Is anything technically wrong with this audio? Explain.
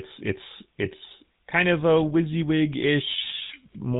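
Yes. Throughout, the speech sounds buzzy and gravelly with nothing above 3.8 kHz. This is the GSM full-rate codec rebuilding the voice from a vocal-tract model driven by sparse, regularly spaced pulses.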